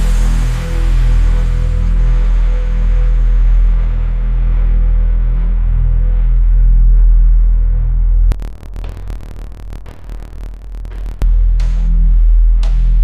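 From 8.32 to 11.23 s the audio drops an octave and buzzes at about 38 Hz. This is interleaved audio read as planar: 26.12 ms blocks are split into halves, and the halves play together at half speed. Unlike plain slow playback, the pace stays correct.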